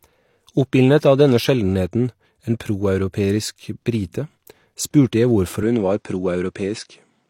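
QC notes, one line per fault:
5.63–7.30 s, input switched to a poorer device: right after "spurte jeg", everything above 9.8 kHz vanishes with no gap or level jump, and a new noise floor appears roughly 55 dB down, likely from another input device. Spectrogram: abrupt flat ceiling at 9.8 kHz.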